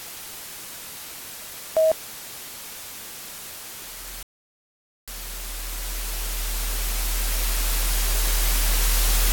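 A rebuffering stall runs from 4.23 s to 5.08 s. The player exhausted the audio it had already downloaded and had to halt until more data arrived, so playback simply freezes into silence for about 0.85 s. When the sound returns, it picks up at exactly the point where it broke off, with nothing skipped or repeated. The only damage is the inserted gap, which stretches the clip's timeline.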